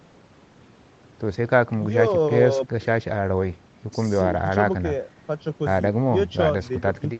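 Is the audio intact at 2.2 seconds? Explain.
Yes, the speech at 2.2 seconds is intact, with no dropout, glitch or distortion at that moment.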